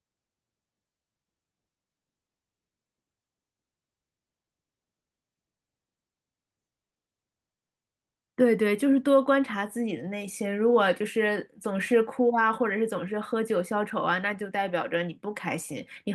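At 6.89 to 6.97 s, a short stall from a late packet holds one sound about 60 ms too long with a faint buzz or dip. Unlike a lost packet, nothing afterward is missing.

From 11.71 to 12.34 s, a jitter buffer speed-up trims pitch periods, around 70 ms in all, so speech runs about 9% faster at unchanged pitch, unlike a resampling speed change.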